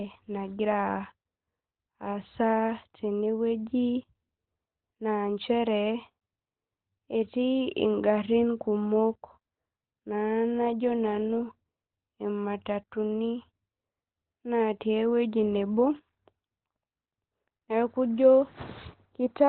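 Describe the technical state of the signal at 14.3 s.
At 14.3 s the speech sounds muffled and hoarse, with nothing above about 4.2 kHz, a state that persists across the whole clip. The likely cause is heavy Opus compression in its narrowband speech mode, consistent with a very low bitrate near 12 kbps.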